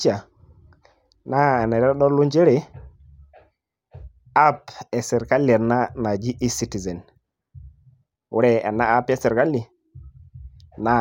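Nothing stood out on listening to this speech recording.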